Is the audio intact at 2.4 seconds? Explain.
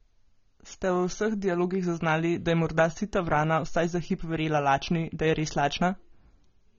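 No. At 2.4 seconds the speech carries AAC compression throughout, likely from a low-bitrate coder. Nothing sounds above 7 kHz, leaving it dull, smeared and warbly.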